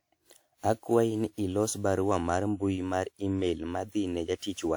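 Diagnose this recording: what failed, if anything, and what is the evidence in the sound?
The codec stage is the culprit: the speech sounds swirly, smeared and hollow all the way through, with blurred attacks, worse than the bandwidth running up to about 20.1 kHz suggests. That's likely generation loss, with around ten passes through a WMA encoder at roughly 128 kbit/s, each pass adding its own quantisation noise.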